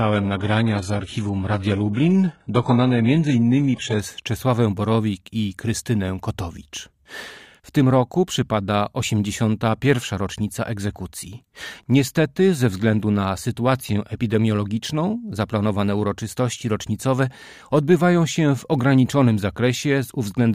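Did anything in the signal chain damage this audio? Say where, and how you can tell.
Yes. A network-stage adaptive stream starting at a low bitrate left 0 to 4.0 s artefact-heavy, nothing above 11.4 kHz, until an abrupt, gapless step up.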